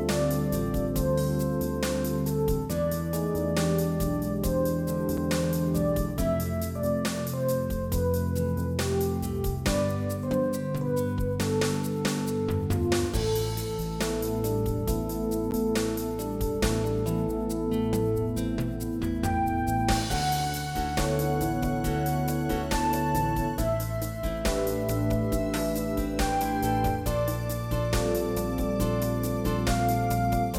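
Two short blocks of digital silence break the audio, one at 5.17 s lasting 5 ms and one at 15.51 s lasting 10 ms. Each is a hard cut to silence and back with no fade, and being under 15 ms each is heard as a tick or dip rather than as silence. Unlike a lone click, each event has a true hole between two edges. That points to an output buffer not being filled in time rather than to a damaged sample.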